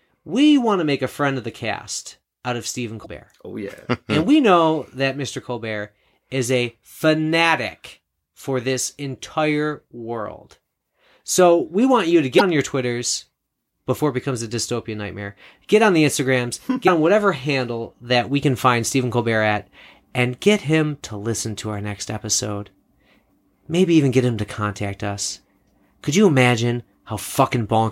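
A short glitch cuts into the speech three times, each lasting about 44 ms: at 3.02 to 3.06 s, at 12.37 to 12.42 s, and at 16.84 to 16.88 s. These are signs of damaged data in a compressed stream. Some of the encoded bytes at those points were corrupted, so the decoder misread the affected frames, lost its place in the stream, and produced a brief disturbance while it searched for the next valid frame header to resynchronise.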